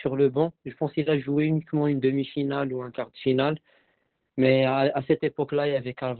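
From start to finish the speech carries Opus voice compression, and it's heavy. Nothing comes through above about 4.2 kHz, so it's squeezed into narrowband, and the coder is running its SILK linear-prediction mode with only a coarse excitation signal. That's why it sounds muffled, hoarse and a bit robotic, which points to a very low bitrate, somewhere around 8 kbps, likely coded in 20 ms frames.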